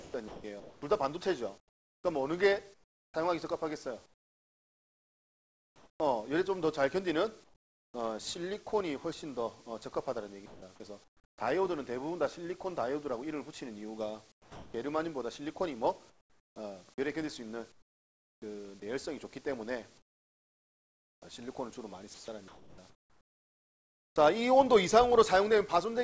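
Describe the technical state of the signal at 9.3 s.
At 9.3 s the signal is intact, with no dropout, glitch or distortion, only the normal band limit of the call path, which leaves nothing above 8 kHz, consistent with a G.722 wideband codec.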